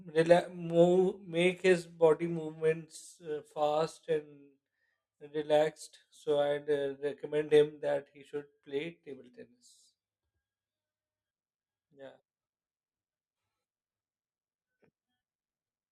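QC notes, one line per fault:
Nothing to flag on this speech recording, so there's no fault line to log here.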